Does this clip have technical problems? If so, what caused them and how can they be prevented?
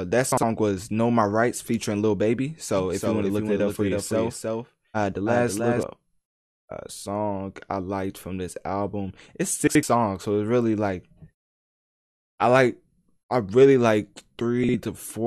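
Yes. Frames out of order occur at 0.32 to 0.43 s, 9.67 to 9.83 s and 14.64 to 14.74 s. At each spot, two neighbouring blocks of speech play in swapped order. The blocks last 52.2 ms at the first and last spots and 78.4 ms at the middle one. That fits runs of two and three frames. Each spot sounds like a brief garbled flutter, and no time is lost. Prevent this by putting packets back in sequence-number order in the jitter buffer before decoding.

A doubled audio track runs from 2.77 to 5.83 s. The speech is heard twice there. A dry, full-band copy trails the original by roughly 300 ms and is about 5 dB quieter. It has no room colour and starts and stops abruptly. The likely cause is a second, slower capture path being mixed into the recording. Prevent this by routing only one source into the recording.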